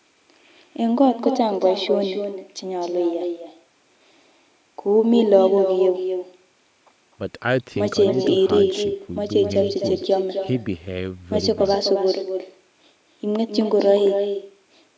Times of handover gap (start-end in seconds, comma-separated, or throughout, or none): none